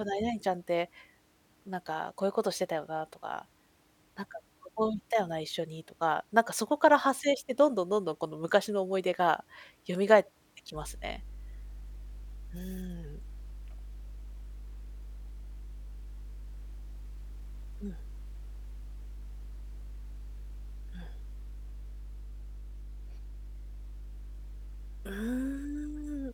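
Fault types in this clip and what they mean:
Mains hum: Power-line current leaks into the signal, often through a ground loop or a nearby transformer. Here a steady 50 Hz tone sets in at 10.73 s and runs to the end. It sits only about 15 dB below the speech, so it is plainly audible.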